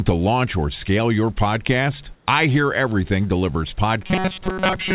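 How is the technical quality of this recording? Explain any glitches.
The recording has two glitches on top of a narrowband call sound. Nothing reaches above 4 kHz, which fits a G.711 telephone codec. Room noise sits about 37 dB below the speech.

Comfort noise in place of the background appears from 2.15 to 2.27 s. For those 120 ms the real background drops out. A steady, featureless hiss about 3 dB quieter fills the gap. The likely cause is that the sender paused transmission, and the receiver synthesised noise instead.

Robotic sound from repeated short buffers runs from 4.02 s to the end. The speech turns into a rigid, metallic buzz at 188 Hz. That rate fits a buffer of roughly 5 ms being replayed. The likely cause is late-arriving audio, patched by looping that buffer over most of the stretch.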